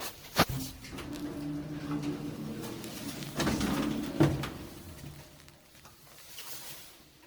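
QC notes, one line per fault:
Throughout, generation loss: the sound is swirly, smeared and hollow, and attacks blur. This is likely repeated MP3 re-encoding, about seven passes at a rate that fits 96 kbit/s. Each pass adds noise and spectral holes. Nothing is heard above 20.1 kHz.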